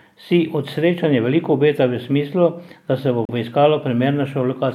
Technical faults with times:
3.25-3.29 Bluetooth stall

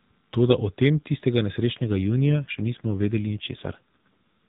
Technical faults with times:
1.76-4.06 AMR rate drop

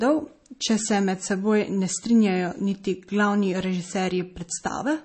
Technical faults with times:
0.00-5.04 MP3 compression

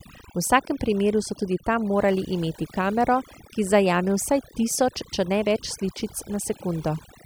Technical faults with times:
0.00-7.25 overdone noise removal

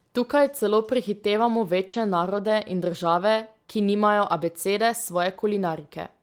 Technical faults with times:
1.87-1.96 burst of packet loss

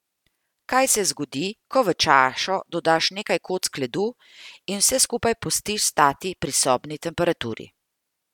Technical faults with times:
none

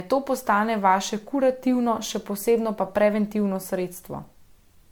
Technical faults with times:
0.00-4.91 generation loss

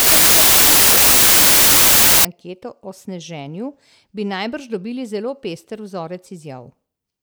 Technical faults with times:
0.00-2.25 wrong sample width

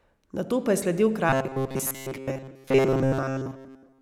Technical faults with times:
1.29-4.02 robotic sound from repeated short buffers

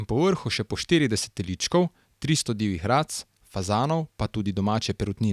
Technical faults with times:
none

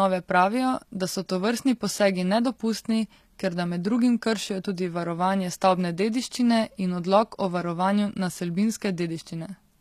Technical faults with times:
0.00-9.81 HE-AAC compression

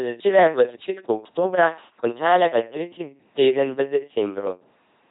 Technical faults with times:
0.00-5.11 LPC-10 vocoder

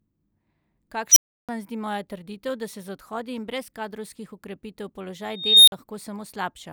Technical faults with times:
1.11-1.49 unstable filter
5.30-5.72 unstable filter

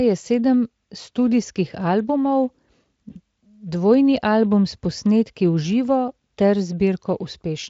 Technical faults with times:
3.11-3.18 VoIP packet loss concealed by the speech codec

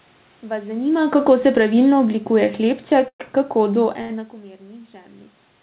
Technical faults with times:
0.93-4.34 automatic gain falling
3.08-3.22 call audio freeze
4.02-4.11 short stall from a late packet

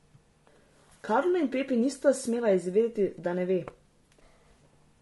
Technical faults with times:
0.00-5.01 low-delay AAC compression
1.05-1.08 AAC frame loss with concealment

